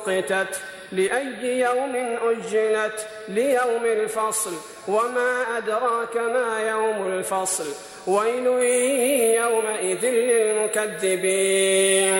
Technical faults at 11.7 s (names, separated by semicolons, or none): pre-emphasis left on